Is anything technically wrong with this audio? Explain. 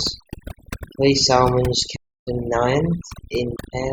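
Yes. Two faults can be heard in this speech clip.

Overdone noise removal affects the whole clip. The noise reduction was set far too strong. Frequency bands close to its noise estimate are pushed down hard or cut out entirely. Quiet parts of the voice fall into those bands and are removed along with the noise. The background between phrases drops and breaks up into twinkling specks.

A playback stall occurs from 1.95 to 2.28 s. The sound cuts out in mid-flow for about 305 ms. It then resumes. The likely cause is the player running short of data, or its audio thread being blocked, so nothing reached the output until it recovered.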